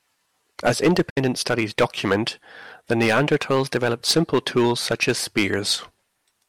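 Hard clipping runs through the whole speech clip. The signal is driven about 14 dB past what one stage can pass, so roughly 2% of samples are cut flat. It is heard as crackle on loud syllables, visible as squared-off peaks on the waveform and vertical streaks of high harmonics on a spectrogram.

A digital broadcast dropout follows from 1.10 to 1.18 s. The receiver lost valid frames and muted, fading down over about 8 ms into a silence of roughly 64 ms, which fits two lost frames. The waveform shows a flat gap, and a spectrogram shows a blank vertical band.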